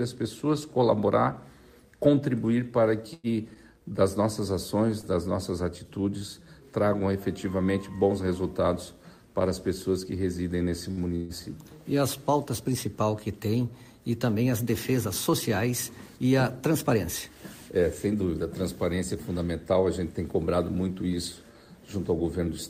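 Scattered short gaps between 3.13 and 5.06 s: about three lost or late packets, the longest roughly a tenth of a second, each patched by continuing the previous sound, leaving brief ticks and smears.

A short stall from a late packet at 10.91 to 11.00 s: the jitter buffer ran dry, so the last sound is held for 63 ms before resuming where it stopped.

A call audio freeze at 11.15 to 11.32 s: the sound hangs as a fading buzz for 140 ms without dropping to silence, then carries on. The likely cause is packets held up in transit emptying the jitter buffer.

A jitter buffer speed-up from 14.92 to 19.35 s: the receiver trimmed surplus buffered audio by cutting short pitch-period pieces, about 200 ms in total, so the sound runs 4% fast at unchanged pitch.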